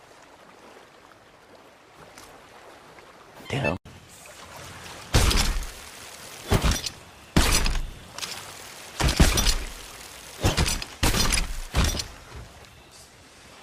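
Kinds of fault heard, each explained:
Stream segment skipped: At about 3.45 s the sound jumps abruptly ahead, with a short blip lasting around 30 ms. The likely cause is one chunk of a segmented stream failing to load, so the player moved straight on to the next chunk.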